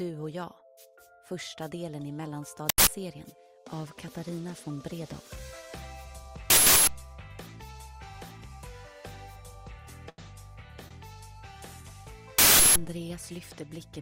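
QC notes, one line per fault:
2.69 s, 6.50 s and 12.39 s: uninitialised buffer. Each one is a sudden, very loud blast of harsh digital noise replacing the sound. The first lasts about 0.19 s, the other two about 0.37 s each. The player sent out a block before any audio had been written into it, so whatever junk was sitting in memory got played as samples. Those lengths fit blocks of 8192 and 16384 samples.
10.09 s and 10.88 s: short stall from a late packet. The sound hangs on itself briefly, a held smear with a slight buzz or dip, first for about 86 ms and then for about 25 ms. A packet turned up late, the jitter buffer ran dry, and the receiver stretched the last bit of audio until the packet arrived. Playback then picks up exactly where it left off, so nothing's lost. It's just late by those amounts.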